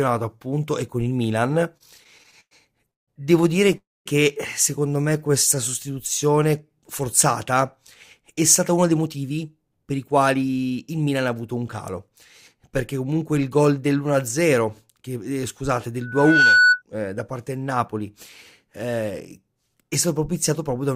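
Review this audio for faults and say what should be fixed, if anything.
Repeated stalls (stutter), 1.77 to 3.75 s: packets kept arriving late, so the jitter buffer emptied 13 times and the receiver stretched the last sound, up to 164 ms at once, making the audio drag and stutter.

Call audio freeze, 3.77 to 4.08 s: the sound holds, decays, then drops to silence for about 0.23 s before resuming where it stopped, likely because packets were held up long enough to drain the buffer.

Jitter buffer slow-down, 5.02 to 5.55 s: with the buffer running low, the receiver repeated pitch periods to add 54 ms, so the audio plays at 91% speed at unchanged pitch and sounds drawn out.

Jitter buffer speed-up, 8.20 to 11.14 s: a backlog of late packets overfilled the buffer, so the receiver trimmed roughly 0.3 s of short pieces, and the audio runs hurried at 109% speed, pitch unchanged.

Loudspeaker feedback squeal, 16.01 to 16.82 s: the microphone picked up its own loudspeaker and loop gain exceeded one at 1.5 kHz, swelling over about 0.4 s into a tone about 10 dB above the signal.

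To prevent these, stabilise the network path (or give the jitter buffer more headroom) and separate the microphone from the loudspeaker or use headphones and echo or feedback suppression.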